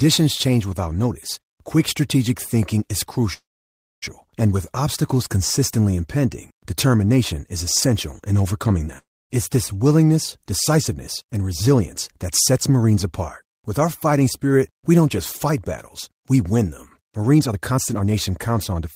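A call audio freeze runs from 3.33 to 4.04 s. Packets were likely held up and the jitter buffer ran empty, so the last sound is stretched into a brief fading buzz and then about 0.6 s of silence. The speech resumes exactly where it stopped, with nothing lost but 688 ms of added delay.

A long network dropout follows at 8.98 to 9.32 s. Audio likely stopped arriving, so the receiver fills 316 ms: a short decaying tail, then about 260 ms of silence. When speech returns, 320 ms of it is simply gone.

Jitter buffer speed-up occurs from 10.38 to 13.05 s and again from 17.34 to 18.88 s. The buffer held excess audio, so tiny pitch-period slices were repeatedly cut: around 150 ms first, at 105% speed, then roughly 400 ms at 124%. The speech sounds rushed at unchanged pitch.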